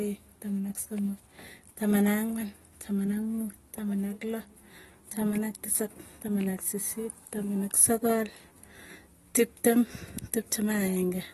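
Dull, smeared speech with a plainly audible warbling, fizzy edge on sibilants runs throughout, with nothing above 12.5 kHz, likely AAC compression at a low bitrate, fitting roughly 32 kbps AAC-LC.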